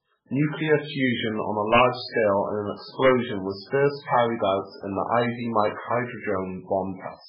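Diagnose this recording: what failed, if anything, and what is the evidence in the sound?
The whole clip is dull and watery, with nothing above 5.2 kHz. That's likely MP3 compression at the codec stage, and the heavy damage points to a very low bitrate, around 8 kbps.

There are violent cracks from integer overflow, probably in sample-format conversion or a gain stage, at 1.74–1.82 s after "fusion on a", at 3.06–3.09 s, and at 4.13–4.15 s. Peaks only about 1–2 dB over full scale wrapped to the opposite sign instead of clipping.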